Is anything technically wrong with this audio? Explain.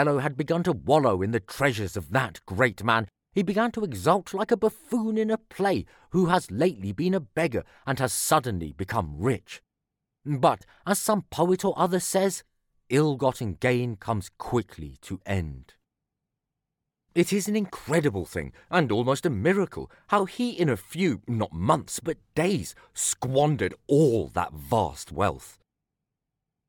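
No, the speech signal comes through without any audible technical fault.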